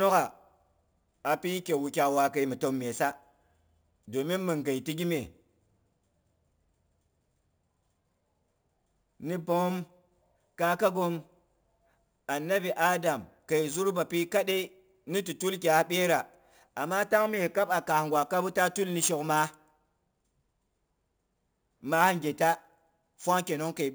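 A bright, metallic fizz follows the speech throughout, about 18 dB below it. This is imaging from sample-and-hold upsampling. Each sample was simply repeated with no smoothing, mirroring the spectrum into 8 kHz to 16 kHz, which fits a 16 kHz source raised to 44.1 kHz.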